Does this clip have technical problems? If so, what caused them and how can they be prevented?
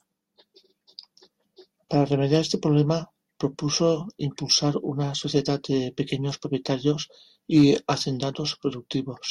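Yes. Hard clipping occurs at 2.34 to 2.37 s and again at 7.57 to 7.70 s in this speech clip. In both places the peaks go about 2 dB beyond what a stage in the recording chain could pass, so the tops of the waveform are sliced flat. Those flattened peaks add high harmonics, heard as a brief crackle on the loudest moments. Leaving a few decibels of headroom by lowering input gain or adding a limiter before conversion would prevent it.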